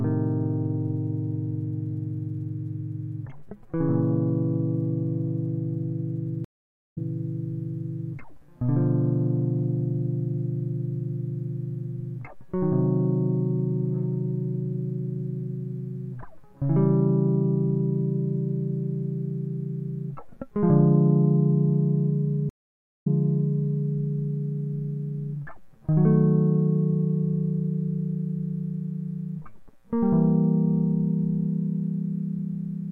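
At 6.45 s the music cuts to silence for 0.45 s and picks up 0.38 s earlier than it stopped, repeating a short stretch; at 22.49 s a 0.49 s silence is followed by a 0.82 s jump back. Both are a stream reconnect: the connection dropped, the player reconnected and restarted decoding from a resent earlier point.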